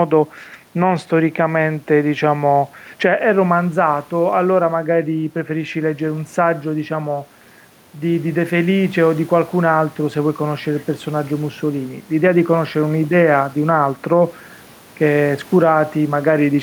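From start to finish the gain pumps, a level swing of around 10 dB, with the room noise sitting about 34 dB below the speech. This gain pumping likely comes from input gain set far too high, with a fast limiter clamping each loud syllable.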